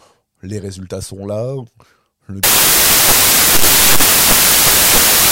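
From 2.44 s to the end, the speech collapses into loud, harsh broadband noise: samples built from the wrong bytes, each assembled from misordered or misaligned bytes so the fast-changing low bits dominate. The waveform fills densely, and the spectrogram shows broadband energy.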